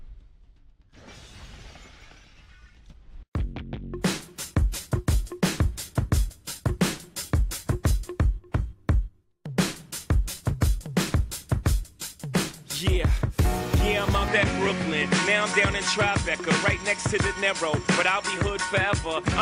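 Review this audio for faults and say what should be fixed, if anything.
From 14.28 s to the end, nothing sounds above 10.1 kHz and a faint new background hiss appears, with no gap or level jump. This is likely an input switched to a poorer device. The new noise floor distinguishes it from a plain filter. Lock the recording input so the system cannot change devices mid-take.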